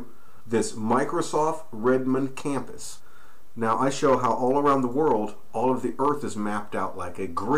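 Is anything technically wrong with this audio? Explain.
Yes. There are two short glitches from damaged data in a compressed stream, at 0.40 s and again at 3.00 s. At each point, part of the compressed data was corrupted, through lost, zeroed or overwritten bytes. The decoder cannot read those frames properly. It loses sync and hunts for the next valid frame header. Each event comes through as a brief chirp or blip.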